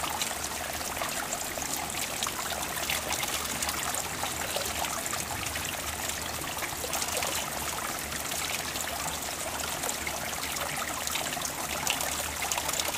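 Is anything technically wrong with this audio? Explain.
No, nothing technically wrong turns up on listening; the signal path sounds intact throughout.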